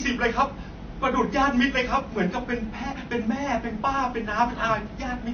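Throughout, the speech has no content above 6.5 kHz and carries layered swirling, smeared artefacts. This is likely transcoding between lossy codecs, fitting low-bitrate MP3 followed by Vorbis.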